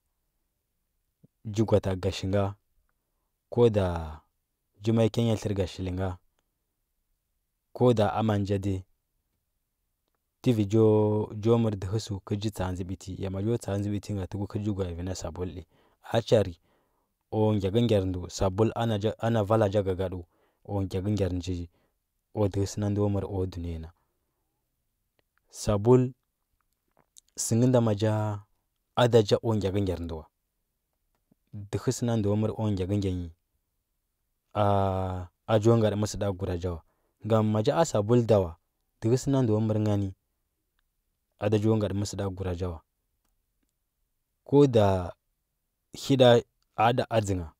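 No technical faults are audible.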